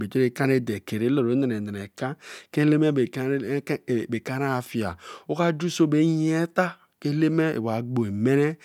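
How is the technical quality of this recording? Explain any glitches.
Nothing here stands out as a glitch; the recording runs along without any dropouts, clicks or other hiccups to point to.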